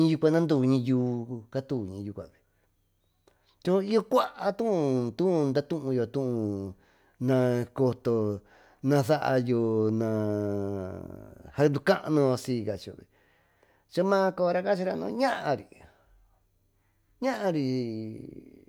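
No audible technical faults anywhere in the speech recording.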